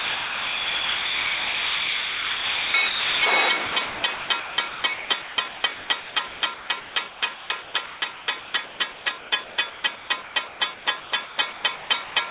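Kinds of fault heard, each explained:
Sound chopped by the voice detector: the sender's voice detector likely kept switching transmission off and on, so stretches totalling about 3.1 s, 3.2 s and 1.4 s across three spans were replaced by comfort noise, leaving the sound choppy.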